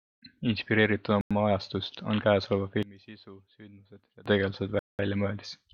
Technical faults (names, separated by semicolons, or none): Bluetooth stall; one channel inverted